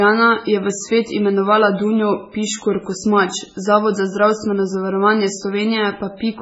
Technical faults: MP3 compression

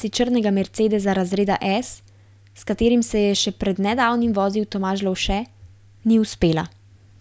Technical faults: none

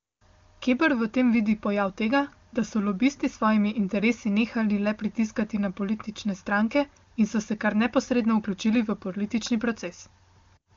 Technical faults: none

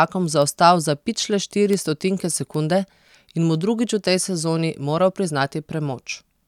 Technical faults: bit error spike

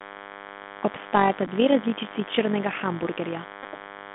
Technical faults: DECT cordless phone buzz; Bluetooth CVSD headset codec; Bluetooth headset packet repeated

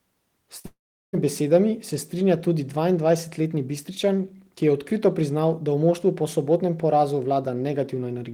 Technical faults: short concealed packet loss; long network dropout

